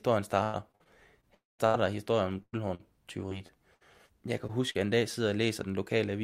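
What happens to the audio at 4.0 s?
At 4.0 s the speech is inside a stretch of repeated packet loss (robotic sound) from 3.29 to 4.11 s. Four gaps, the longest 60 ms, are patched by extending the preceding sound, giving choppy speech with pieces missing. A spectrogram shows frozen, smeared harmonic patches with abrupt edges.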